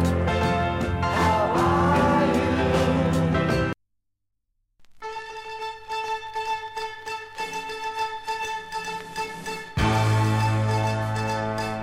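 The signal holds steady throughout, with no dropouts, level jumps or timing disturbances anywhere in the recording.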